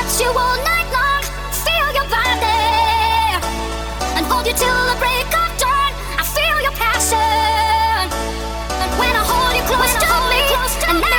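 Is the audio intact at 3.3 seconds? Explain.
No. From 2.59 to 5.53 s a call bitrate drop makes the sound rough and muffled as the encoder codes coarsely and trims high frequencies, consistent with a fall from about 48 to 14 kbps. Unlike packet loss, the audio never gaps; it degrades, then recovers.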